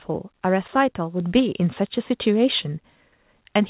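At 1.2 s the microphone volume is stepped up. The call software judged the input too quiet and raised the device's input volume in a single jump of about 5 dB. Speech and background noise rise together at that instant. The level lifts abruptly instead of easing in. The whole clip is band-limited to 4 kHz, which points to a narrowband telephone codec such as G.711.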